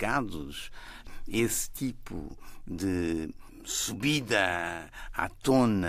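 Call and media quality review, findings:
No faults found in the speech recording on listening review. Nothing heard to attribute to capture, transport or playback components.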